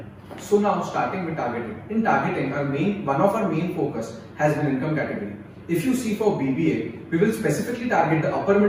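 Nothing is technically wrong with the audio.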